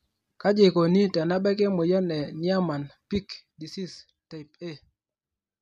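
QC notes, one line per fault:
No faults found.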